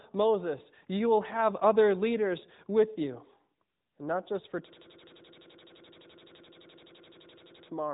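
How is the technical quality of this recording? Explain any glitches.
The recording has two clear faults: a band-limited mobile-codec sound throughout, and a hard stutter near the end.

AMR narrowband mobile codec, throughout: the speech passes through a vocal-tract model that rebuilds each 5 ms stretch from a few pulses and discards everything above 3.8 kHz. The result is muffled, plainly buzzy and synthetic, consistent with a rate around 10.2 kbps.

System hang loop, from 4.69 s to 7.68 s, right after "not just for": the system froze while the audio hardware kept replaying one 85.33 ms stretch of its ring buffer, which fits a 4096-sample buffer. That fragment repeats at about 11.7 per second, producing a rapid machine-gun stutter.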